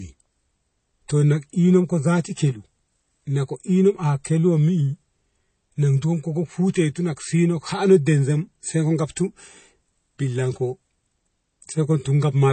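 MP3 compression damage runs through the whole speech clip: nothing above 8.3 kHz, with a watery swirl, likely from dropped weak frequency lines at a starved bitrate near 32 kbps.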